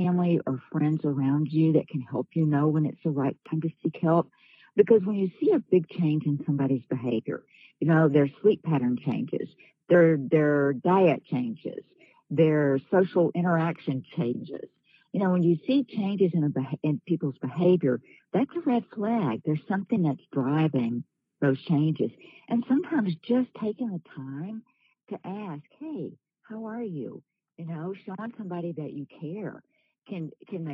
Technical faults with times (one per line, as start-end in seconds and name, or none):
none